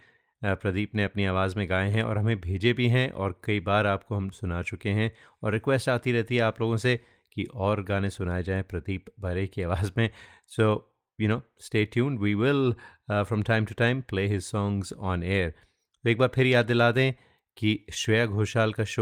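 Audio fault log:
Nothing to log here, as there's no fault anywhere in this speech recording.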